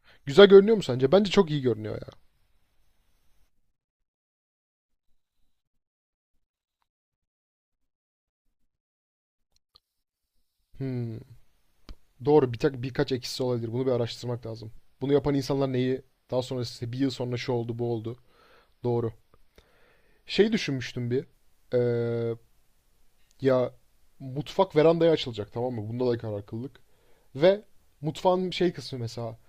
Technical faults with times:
25.33-27.23 drift correction step

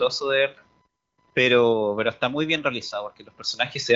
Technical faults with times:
0.00-3.96 computer activity noise

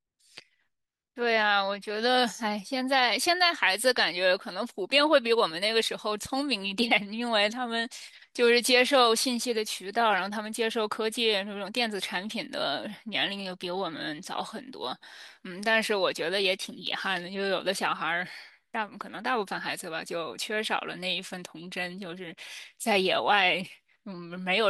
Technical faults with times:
none

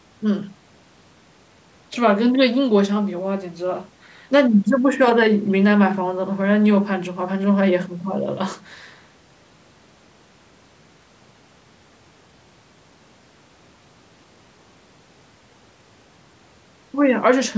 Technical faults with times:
none

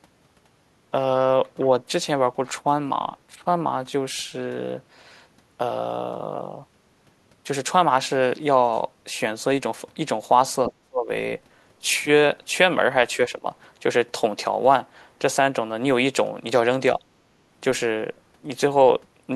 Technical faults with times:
10.65-10.72 other side's voice leaking through
10.70-11.09 speech suppressed in double talk
13.29-13.46 speech suppressed in double talk

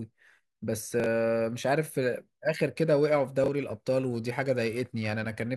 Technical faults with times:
1.00-1.06 chunks out of order
2.78-5.50 periodic clock jitter
3.44-3.48 chunks out of order

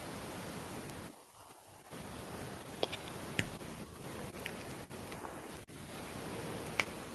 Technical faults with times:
0.90 bit error spike
5.57 bit error spike

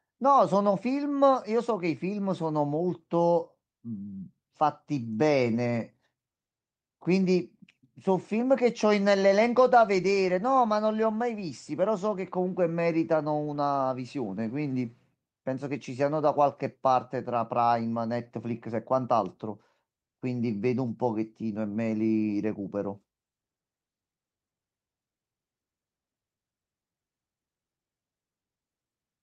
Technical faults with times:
none

